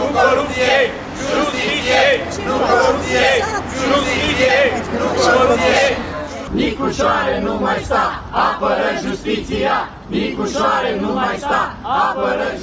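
No technical faults are audible.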